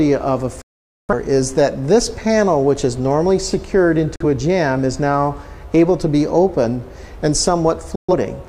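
The audio has three digital broadcast dropouts. The sound fades out within about 3 ms and goes silent from 0.62 to 1.14 s, from 4.16 to 4.25 s, and from 7.95 to 8.14 s. The first hole loses about 0.47 s, which fits roughly eleven lost frames. The others lose about 43 ms and 128 ms. The receiver muted while frames were bad or missing. It resumed later in the programme, so the missing sound is gone.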